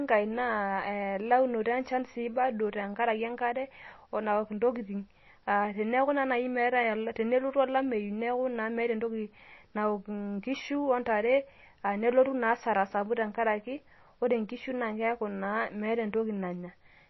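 Speech throughout sounds dull and watery, with nothing above 5.8 kHz and swirly, plainly audible smearing, likely MP3 compression at a low bitrate around 24 kbps dropping treble and weak frequency lines.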